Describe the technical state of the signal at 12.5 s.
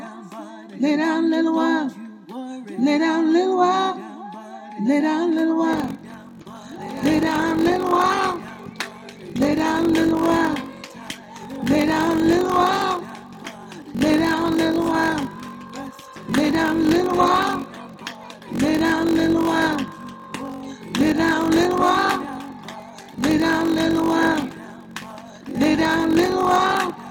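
At 12.5 s you're inside a block size mismatch (padded), running from 5.72 s to the end: zero-filled gaps in each block, consistent with 1024-sample reads, give a 46.9 Hz buzz and slow the sound to 0.861 speed with its timbre unchanged.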